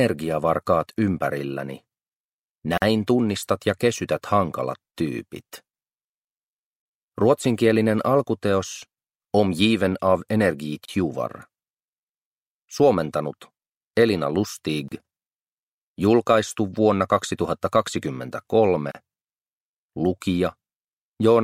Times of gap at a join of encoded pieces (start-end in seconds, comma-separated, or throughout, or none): 2.78-2.82, 10.85-10.88, 14.88-14.92, 18.92-18.95